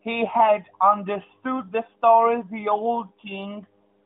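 Nothing goes wrong anywhere in the speech here: the narrow, phone-like sound, with the top end stopping around 3.6 kHz, is just the AMR narrowband mobile codec working as it should, and its light touch fits the codec's highest-quality mode of about 12.2 kbps.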